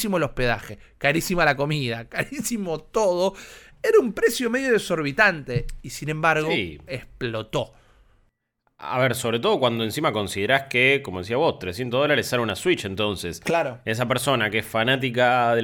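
At 5.51 s there is a single sharp click in the speech. It is a very brief event, heard as one tick and gone. The likely cause is dropped samples: a couple of samples missing from the stream. The waveform jumps straight from one value to a later one, and that step makes the click. The gap lasts a tiny fraction of a millisecond, far too short to remove any sound.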